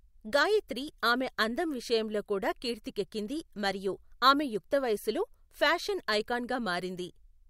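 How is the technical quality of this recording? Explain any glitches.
No technical glitches turn up anywhere in this speech recording. There is nothing at any point that needs explaining.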